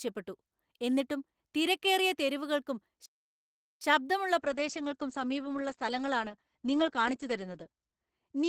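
At 3.06 s, just after "എന്നിട്ടും തിരക്കേറിയ തെരുവുകൾക്കും", a playback stall, likely from the player running dry, silences the speech for about 0.75 s until 3.81 s. From 4.4 s, after "എന്നിട്ടും തിരക്കേറിയ തെരുവുകൾക്കും ശബ്ദമുള്ള", a call bitrate drop from 32 to 10 kbps narrows the bandwidth from 20 kHz to 8 kHz, so the speech sounds muffled and coarse to the end.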